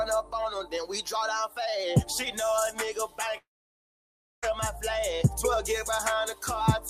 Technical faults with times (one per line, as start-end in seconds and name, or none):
0.57-0.73 sound cut by the noise suppressor
3.37-4.44 long network dropout